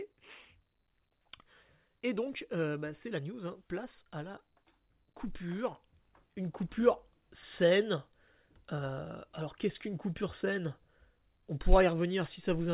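No technical faults can be heard anywhere in the speech. It comes through a WebRTC call path, and nothing reaches above 4 kHz, a narrowband telephone sound that fits G.711 A-law coding.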